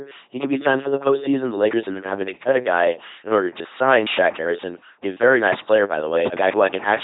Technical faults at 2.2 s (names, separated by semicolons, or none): LPC-10 vocoder